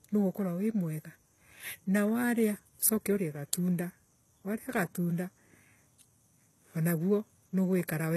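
Throughout the speech, the treble is bright but synthetic, with gritty, lispy s sounds and nothing above 12.3 kHz. This is likely HE-AAC compression at a very low bitrate, around 16 kbps, rebuilding the highs by copying lower bands rather than simply cutting them off.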